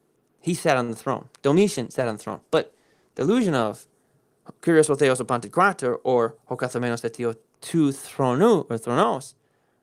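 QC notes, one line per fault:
0.83–0.90 s, short stall from a late packet: a sound is briefly held and drawn out, with a faint buzzy smear, before the speech carries on from exactly where it stopped. A packet missed its playout time and the jitter buffer ran dry, so the receiver stretched the last stretch of audio to fill about 50 ms until the packet turned up. Nothing is skipped, but playback now runs about 50 ms later than before.
1.55–3.98 s, call bitrate drop: the speech goes rougher and duller, losing crispness and taking on a watery, smeared texture. The call's bandwidth estimate fell and the encoder's rate was cut from 32 kbps to 16 kbps, holding at the low setting for about 2.4 s. With half the bits, Opus quantises the spectrum more coarsely and gives up high-frequency detail, so clarity suffers until the rate climbs back.
6.46–7.07 s, jitter buffer speed-up: the speech sounds slightly hurried, running about 7% fast while the pitch stays where it was. 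The jitter buffer had built up more audio than its target, so the receiver trimmed it by cutting out many short pitch-period-length pieces in quick succession, removing roughly a twentieth of a second in total. Because whole periods are dropped, the tempo rises without any change in pitch.
9.03 s to the end, sudden gain jump: the level drops abruptly by about 5 dB, with speech and background noise falling together at the same instant rather than fading. That abrupt, all-at-once step points to a gain change applied between one sample and the next with no ramp, likely a setting or bit shift taking effect instantly, and the reduced level then holds to the end.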